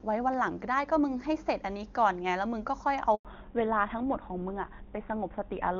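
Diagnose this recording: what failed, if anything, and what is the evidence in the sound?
The failure is at the network stage: a handover gap. At 3.15 s the speech fades out within a few tens of milliseconds. It stays silent until 3.25 s, a gap of 100 ms. The call was passed from one network to another. No speech frames arrived while the link switched, so nothing could be decoded. The speech that fell in that window is gone.

The second fault is at the codec stage: a fallback to narrowband. Before 3.25 s the speech is clear, wideband HD Voice with faint or no codec damage, consistent with a high AMR-WB rate. From 3.25 s to the end, nothing above 4 kHz remains. The speech turns duller and rougher. This fits a switch to an older narrowband codec such as GSM full rate at 13 kbit/s after the handover.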